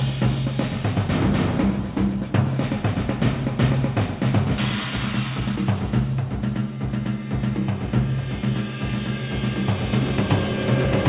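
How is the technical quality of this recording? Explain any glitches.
The recording has two timing glitches close together, both from a call's receive side, and the sound is narrowband, with nothing above 4 kHz, which fits a G.711-style telephone codec.

At 4.58 to 4.6 s there is a skip ahead: the sound jumps abruptly forward with no gap, and about a second of audio is simply missing. That stretch was dropped, either on the way or by the jitter buffer, while later audio was already queued, so both sides are spliced almost directly.

From 4.69 to 5.66 s comes a jitter buffer speed-up: the sound runs hurried, about 116% speed, at unchanged pitch. Having too much audio buffered, the receiver repeatedly cut out short pitch-period pieces, removing roughly 150 ms to bring the delay back down.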